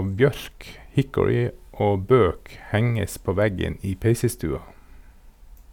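No technical faults occur at any point in the recording.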